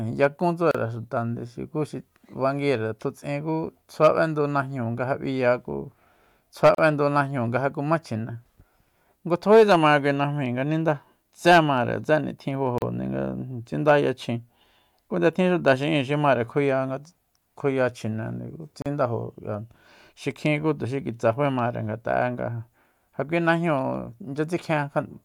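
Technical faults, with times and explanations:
0.71, 6.75, 12.78 and 18.82 s: gap at a join of encoded pieces. The speech drops out for 33 to 37 ms every 6.0 s, then resumes where it stopped. Separately encoded segments were joined untrimmed, leaving encoder start delay and end padding as silence with smeared edges.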